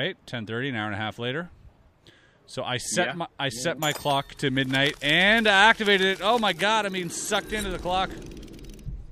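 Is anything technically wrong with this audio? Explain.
No, nothing technically wrong can be heard in this audio; the signal stays intact and steady throughout, with no faults to report.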